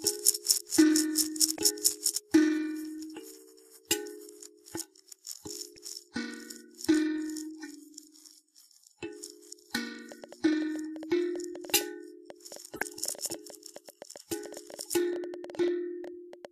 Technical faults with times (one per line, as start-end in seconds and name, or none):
1.55-1.59 corrupt frame decoded
5.76 corrupt frame decoded
10.12-16.46 train of clicks
12.76-12.82 corrupt frame decoded
16.04 corrupt frame decoded